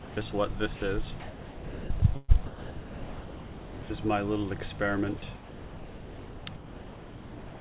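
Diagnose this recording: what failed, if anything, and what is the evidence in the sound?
The fault sits in call processing at the sending end and is likely a voice detector that dropped sound. From 0.00 to 0.16 s and again from 0.76 to 0.82 s, the sound gives way to steady noise or near silence and then returns. The detector judged those stretches to be background and stopped sending, and the receiver filled the gaps with comfort noise. A spectrogram shows flat, uniform noise bands with no structure, and the waveform shows a low, even envelope.

The same stage also likely chopped the sound in two longer spans, from 1.20 to 3.90 s and from 5.18 to 7.61 s. Most of each span was replaced by synthetic comfort noise as the detector repeatedly switched sending on and off. Edges and quiet portions drop out. On a spectrogram this looks like a patchwork of real content interleaved with smooth noise blocks. 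The waveform shows abrupt envelope steps at each switch, all within a band ending at 4 kHz, which fits a G.711 call path.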